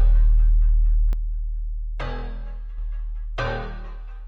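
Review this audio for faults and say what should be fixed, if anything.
From 1.13 s to 2.78 s the level falls abruptly by about 6 dB, then returns. This is likely one channel dropping out. When a stereo feed is summed to mono, losing one side halves the shared content, and anything carried only on that side disappears.

To prevent it, check the stereo connections and meter both channels separately before the mono sum, so a lost side is caught during capture.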